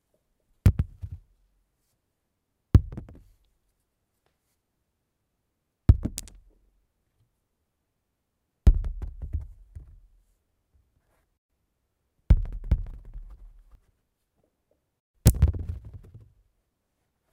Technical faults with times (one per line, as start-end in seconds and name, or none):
12.71-13.75 doubled audio track